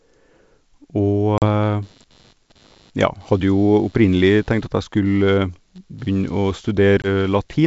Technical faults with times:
1.38-1.44 packet loss on an ADPCM call
1.82-7.67 computer activity noise
7.02-7.08 packet loss on an ADPCM call

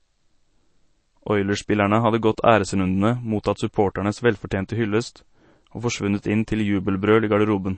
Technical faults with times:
0.00-7.78 MP3 compression

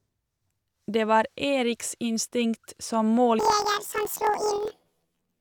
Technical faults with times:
3.39-5.41 planar audio read as interleaved

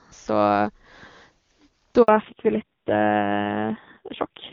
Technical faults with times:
2.02-2.08 handover gap
2.08-4.52 fallback to narrowband

